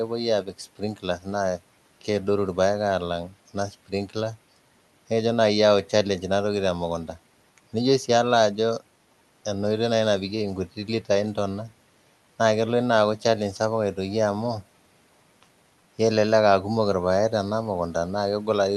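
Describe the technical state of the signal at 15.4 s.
At 15.4 s the signal is intact, with no dropout, clipping or other fault, only the room noise sitting well below the speech.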